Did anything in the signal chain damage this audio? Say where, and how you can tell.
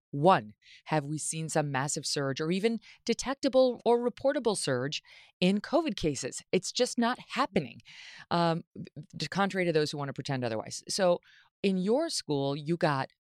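No, nothing stood out on listening to this speech recording that would point to damage anywhere in the signal chain.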